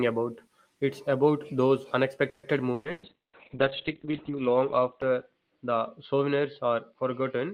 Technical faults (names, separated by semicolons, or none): repeated packet loss (robotic sound); call bitrate drop